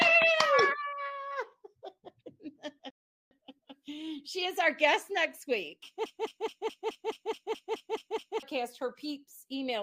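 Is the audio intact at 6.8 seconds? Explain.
No, 6.8 s falls inside a broken-record loop running 6.06 to 8.43 s: a 213 ms fragment repeats eleven times, likely from a stalled player or stream.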